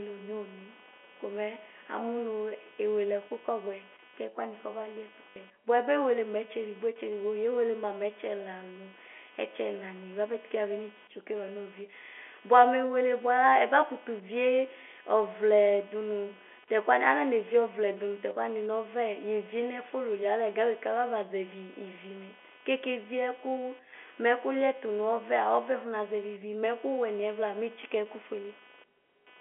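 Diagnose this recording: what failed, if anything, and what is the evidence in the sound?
Computer activity noise in the analogue wiring: throughout, a buzzy chirp pulsing near 300 Hz sits about 25 dB below the speech. Processor load shifts the shared ground. A spectrogram shows regular vertical striping unrelated to speech.

Packet loss with last packet repeated, a network fault: from 5.30 to 5.36 s, 60 ms was replaced by a repeated chunk, which fits three lost 20 ms packets. It produces a short robotic stutter. The waveform shows identical repeated segments.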